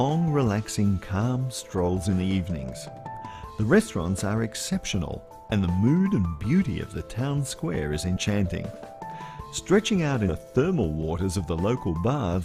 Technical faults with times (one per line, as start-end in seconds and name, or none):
2.09-2.11 compressed frames skipped
8.16 compressed frames skipped
10.28-10.31 compressed frames skipped